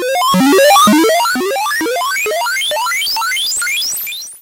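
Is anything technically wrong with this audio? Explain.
Yes. From 0.31 s to the end there is a block size mismatch (padded): each block is slightly shorter than the next stage reads, and the remainder is filled with zeros. Those regular gaps produce a 91.5 Hz buzz, and the sound runs about 0.4% slow (0.996×) at essentially normal pitch.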